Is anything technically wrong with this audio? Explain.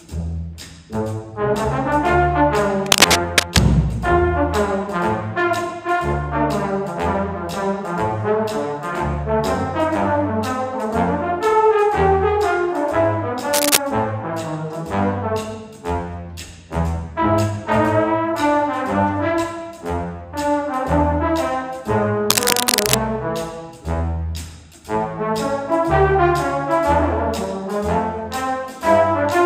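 Yes. Three bursts of cable scratch noise sit on the audio, at 2.86 to 3.59 s, 13.52 to 13.77 s and 22.30 to 22.95 s. Each is a dense, uneven crackle that rasps over the sound, roughly as loud as the signal and in the first two a little louder. The likely cause is a worn cable, connector or control being moved, so its contact resistance jumps around rapidly and injects noise into the signal path.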